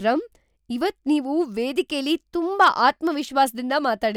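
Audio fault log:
0.14–4.12 s, clock slip clicks: faint ticks roughly every 50 ms, around seventy in all, forming a soft rattle under the speech. Each is a single dropped or repeated sample, likely from two unsynchronised clocks drifting apart by roughly 400 ppm.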